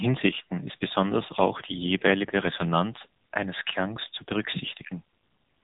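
From start to finish the speech carries the sound of an AMR narrowband mobile codec, heavily damaged. Nothing above 3.8 kHz survives, and the vocal-tract model, starved at what sounds like roughly 6.7 kbps, renders the voice buzzy, thin and synthetic throughout.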